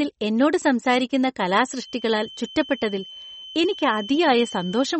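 From the start the speech sounds watery and swirly, with sibilants going chirpy and metallic and nothing above about 8.4 kHz. That's likely heavy MP3 compression, and the dullness fits a low bitrate around 33 kbps, where the encoder drops the treble and lets weak bands flicker.

Then at 1.73 s, right after "എന്നോട് സംസാരിക്കുന്ന", a thin feedback whistle at 3.1 kHz comes in and stays to the end, swelling and fading slowly, around 20 dB under the speech. It's likely a speaker-to-mic loop sitting just short of runaway.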